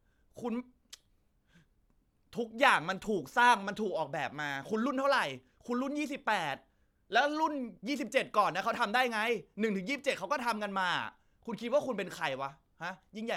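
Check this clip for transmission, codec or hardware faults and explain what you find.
Nothing in the recording points to a transmission, codec or hardware problem. The speech continues without any audible disturbance to flag.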